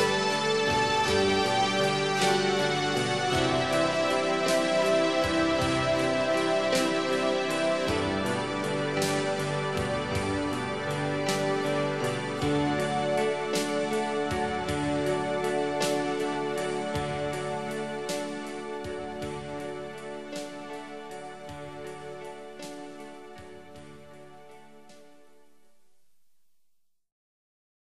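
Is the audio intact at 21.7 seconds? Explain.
Yes, the audio is intact at 21.7 seconds, with no fault present at that moment.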